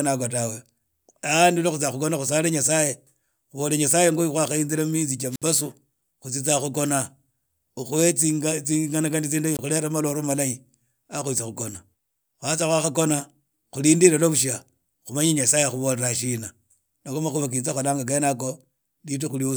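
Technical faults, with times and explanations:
5.30–5.44 s and 9.54–9.59 s: wireless microphone squelch dropout, twice in this speech. Each time the radio link weakens, a short rise of hiss builds, then the receiver's squelch mutes the output for about 59 ms and about 22 ms respectively, and the speech resumes. The hiss swelling just before the silence points to a fading analogue FM carrier rather than a digital packet dropout, which cuts in abruptly with no noise beforehand.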